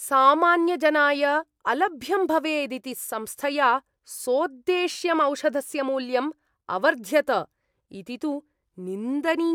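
No technical faults are audible anywhere in the speech recording.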